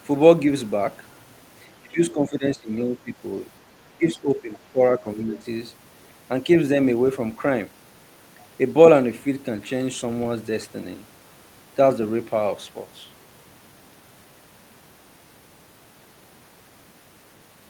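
From 1.82 to 3.11 s the speech sinks in pieces, by roughly 20 dB at its deepest. It drops again from 3.86 to 4.79 s, by around 15 dB. Shorter dips follow at 4.99 to 5.06 s and 5.26 to 5.45 s, each shallower. This pattern is likely speech suppressed in double talk. The echo canceller seems to have mistaken this talker for loudspeaker echo while the far side spoke, and turned the voice down.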